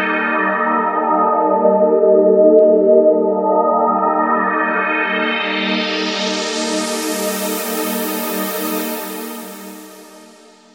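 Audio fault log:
No fault found.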